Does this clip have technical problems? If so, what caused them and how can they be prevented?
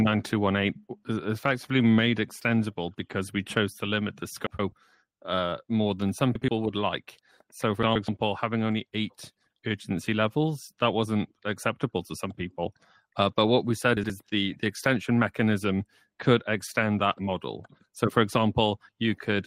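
Yes. Short garbled flutters occur at 4.46–4.72 s, 6.35–6.49 s, 7.83–8.08 s and 13.97–14.10 s. These are frames out of order: two neighbouring blocks of 128 ms (or 64 ms in the shorter cases) were decoded swapped. Sequence-numbering packets and reordering them in a jitter buffer prevents this.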